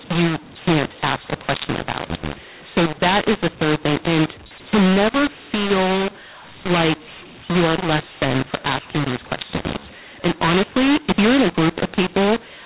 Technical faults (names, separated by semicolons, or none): mu-law and A-law mixed up